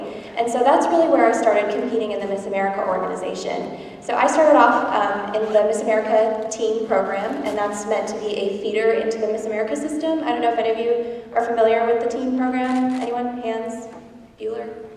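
No technical faults are audible anywhere in this audio.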